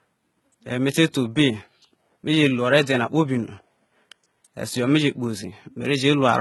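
Speech all the way through, and the top end gives it away: the treble sounds synthetic, with s sounds coming out gritty and a bit lispy, and there's nothing at all above about 11.8 kHz. That's likely HE-AAC compression, where only the lower spectrum is really coded and the highs are patched in by copying lower bands upward under a rough envelope. The damage is heavy, which fits a very low bitrate, somewhere around 16 kbps.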